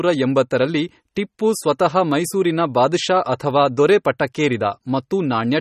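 MP3 compression artefacts run throughout the speech, from start to finish. Nothing sounds above 15.2 kHz, and the damage is plainly audible: a watery, swirling texture with metallic chirps on s sounds and smeared consonant attacks. The likely cause is MP3 encoding at a low bitrate, around 32 kbps. Short of bits, the encoder cuts off the treble and drops quieter frequency lines, and those lines flicker on and off from frame to frame.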